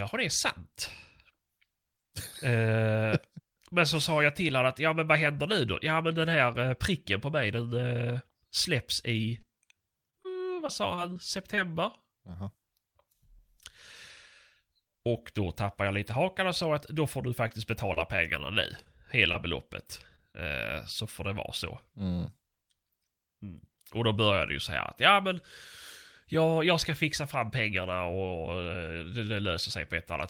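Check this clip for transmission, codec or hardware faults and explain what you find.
Scattered short gaps appear in two stretches of this speech, 9.29 to 11.84 s and 17.48 to 20.35 s, with roughly ten and seven tiny dropouts, none longer than about 30 ms. Lost or late packets were patched by extending the preceding sound, producing brief ticks and smears. On a waveform, short repeated or flattened segments show; a spectrogram shows small smeared vertical bands.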